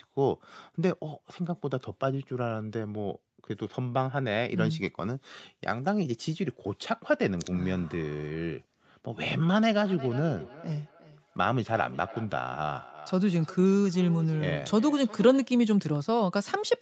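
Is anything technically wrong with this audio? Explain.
Yes. From 9.83 s to 15.62 s there is feedback echo between two devices: each phrase returns roughly every 0.4 s, at about -17 dB below the speech, thinner and more ringing on each pass. A second device in the room replays this call, the original microphone picks that up again, and its echo canceller only removes what its own device plays.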